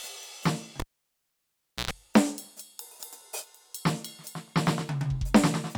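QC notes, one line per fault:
0.80–1.91 s, cable pulled and plugged in: a pop, then about 1.06 s of near silence, then roughly 108 ms of 60 Hz mains buzz as only the plug tip touches, then a second pop when the music returns. Unlike a plain dropout, it has pops and a hum burst.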